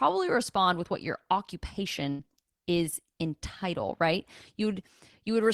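Speech with a burst of packet loss from 2.09 to 2.21 s, just before "is in title right": about 100 ms is concealed by a fading, smeared repeat, visible as a decaying band before audio resumes.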